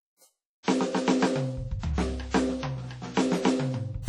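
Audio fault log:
Throughout: WMA compression, likely; washy, ringing music with hiss breathing alongside the signal, consistent with about 32 kbps. A spectrogram shows nothing above 17.2 kHz and patchy, gapped upper bands.
0.63–0.68 s: pre-echo; a short hiss rises about 50 ms before a sharp attack, softening it. The waveform shows a noise smear ahead of the transient.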